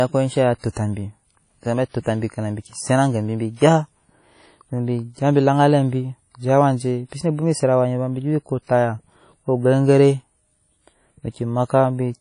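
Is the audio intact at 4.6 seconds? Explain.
No. At 4.6 seconds the speech has the same smeared, ringing quality heard across the whole clip, with a washy hiss that swells and fades with the sound and nothing above about 10.1 kHz. This is likely WMA compression at a low bitrate, which fits roughly 32 kbps. The transform coder spreads its quantisation noise over long blocks tens of milliseconds wide, and at this rate it discards weak spectral detail and the top band.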